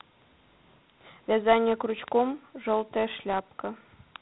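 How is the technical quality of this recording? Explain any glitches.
Technical quality is poor because of one fault that runs through the whole speech clip. Dialogic VOX ADPCM: 4-bit adaptive steps leave gritty hiss riding on speech, with nothing above 3.9 kHz, which fits 32 kbps at 8,000 samples a second. Unlike plain band-limiting, the grit rises and falls with the voice.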